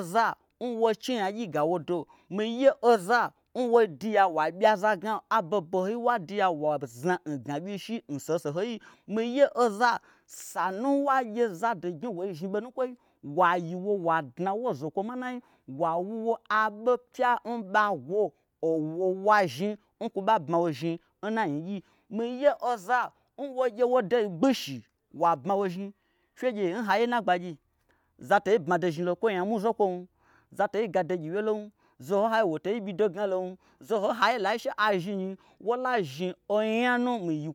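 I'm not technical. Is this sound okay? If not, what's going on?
Yes, nothing stood out as a problem when listening to this recording.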